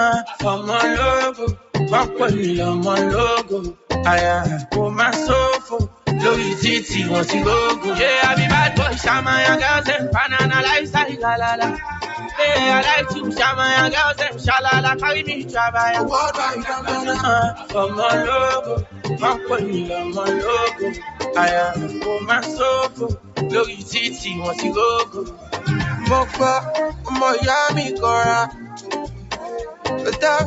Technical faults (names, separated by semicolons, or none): noise suppressor applied to music or sounds; sound cut by the noise suppressor